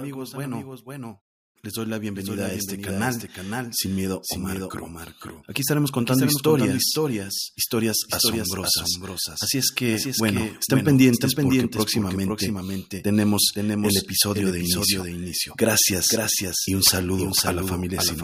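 A second capture path, most likely slower than the first, has mixed the speech into the output twice for the whole clip. A full-band copy trails the original by roughly half a second at around 5 dB lower, so every phrase is followed by a flat, dry repeat with no decay or room colour. This doubled audio track is present throughout, and the muted pauses still fall silent in the longer gaps.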